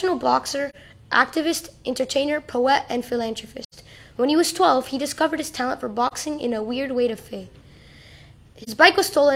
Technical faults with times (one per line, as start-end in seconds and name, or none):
0.70-0.75 AAC frame loss with muting
3.63-3.74 AAC frame loss with muting
6.07-6.13 AAC frame loss with muting
8.62-8.69 AAC frame loss with muting